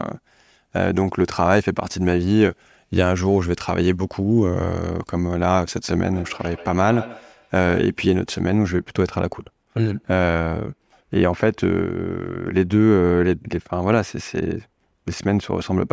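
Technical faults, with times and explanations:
6.06 to 7.87 s, feedback echo between two devices: two devices in the same room were joined to one call, so one loudspeaker replayed what the other microphone had sent, and that microphone captured it again. Each device's echo canceller only removes its own playback, so this loop went uncancelled. The speech returns roughly every 150 ms as a thin, ringing copy trailing the original, reaching about 16 dB below the speech at its loudest.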